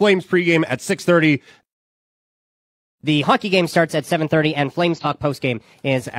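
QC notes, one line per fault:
1.63 to 3.01 s, playback stall: the speech stops dead for about 1.4 s, then resumes. Likely the player ran out of buffered data.
3.01 to 6.01 s, catch-up at higher speed: the speech runs 1.15 times fast, pitch raised about two semitones, while the player works through its backlog.
4.95 to 5.06 s, AAC frame loss with concealment: one frame of about 43 ms goes missing. The decoder fills it from the previous spectrum, leaving a brief smeared, noisy patch.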